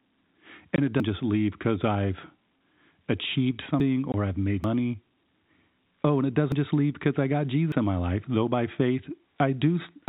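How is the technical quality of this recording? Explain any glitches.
The recording has two kinds of glitch: short silent holes and abrupt skips. It has the narrow telephone sound of G.711 coding, with nothing above 4 kHz.

Packet loss filled with silence occurs at 0.76–0.78 s and again at 4.12–4.14 s. Each is a 20 ms gap of dead silence with hard edges. A single lost network packet was replaced by silence, and 20 ms matches one packet's length.

Dropped buffers (overruns) are heard at 1.0, 3.8, 4.64, 6.52 and 7.72 s as jumps where the sound skips forward without any silence. Roughly a tenth of a second vanishes at the first two, and less at the others. The likely cause is that incoming samples were overwritten before being collected.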